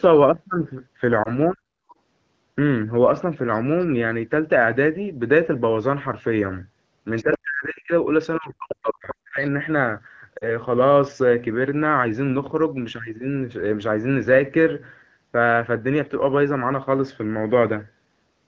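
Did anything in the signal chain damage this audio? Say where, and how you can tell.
Yes. Lost AMR speech frames at 1.24–1.29 s (one 20 ms frame) and 10.38–10.46 s (two frames): radio errors caused brief dips where the decoder concealed the gaps.

Speech suppressed in double talk at 1.52–1.73 s, 7.23–7.92 s and 8.39–9.59 s, dropping about 40 dB. The likely cause is the call echo canceller ducking the talker.

The other side's voice leaks through at 1.89–1.95 s, 7.16–7.38 s, 8.42–8.46 s and 8.71–8.75 s, about 15 to 40 dB below the speech. This is likely residual loudspeaker echo that the canceller missed.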